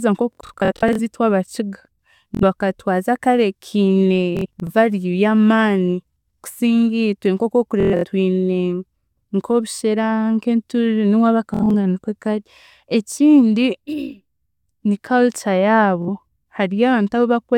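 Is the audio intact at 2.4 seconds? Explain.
No. A Bluetooth stutter runs from 2.35 to 2.43 s. About 70 ms of data went missing, and the receiver replayed its last buffer. This makes a brief buzzing stutter.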